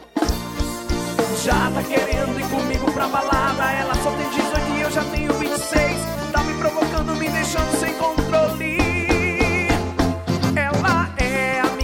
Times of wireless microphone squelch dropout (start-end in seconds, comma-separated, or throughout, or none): none